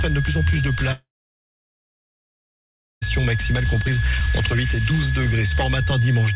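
A switching supply whistle runs throughout, a thin tone wandering between 1.63 and 1.72 kHz about 10 dB below the signal, inside the 4 kHz telephone-band ceiling. From 0.92 to 3.03 s, a long network dropout: the last sound smears into a brief fading buzz or hiss, then near-silence, likely from about 2.1 s of lost packets.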